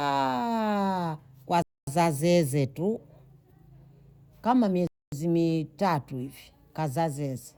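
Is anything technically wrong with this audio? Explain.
Yes. The speech has a gap between chunks, occurring twice. Silence runs from 1.62 to 1.87 s, just before "zeze tu", and again from 4.87 to 5.12 s. Each hole lasts 250 ms, and they recur on a 3.25-second cycle. That timing points to audio delivered in 3-second chunks, with dead air inserted at each join. No speech is lost; it simply stops and resumes. They sound like short holes in the speech.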